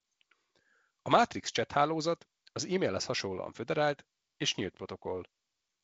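Nothing goes wrong in this bit of speech, which comes through a G.722 wideband telephone link at 48 kbit/s, so the sound tops out around 7.9 kHz and carries the light coding grain you'd expect at that rate.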